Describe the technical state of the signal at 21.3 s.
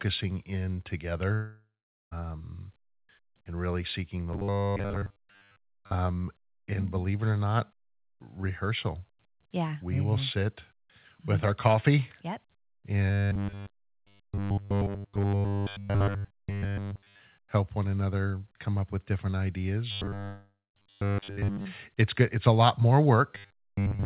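Fresh audio likely stopped arriving, so a 10 ms buffer repeats from 19.91 to 21.65 s. The result is robotic sound from repeated short buffers: a rigid, metallic 100 Hz buzz.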